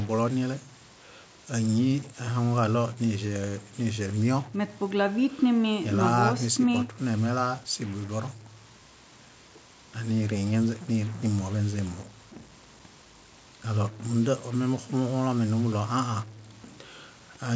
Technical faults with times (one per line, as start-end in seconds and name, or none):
0.00-17.55 stuck bit